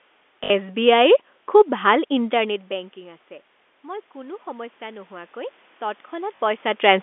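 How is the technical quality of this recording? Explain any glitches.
The recording has two kinds of glitch: brief repeated-packet stutters and a gradual automatic gain rise.

Packet loss with last packet repeated, at 0.44–0.50 s and 6.36–6.40 s: missing audio was filled by replaying the previous packet, creating short robotic stutters that point to 20 ms packets.

Automatic gain rising, from 3.82 s to 6.98 s: the input level dropped by about 20 dB, so the gain control raised its gain by about 6 dB, and voice and room noise swell together.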